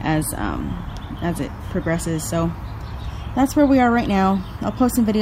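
Nothing stood out on listening; no technical fault could be heard anywhere in the clip.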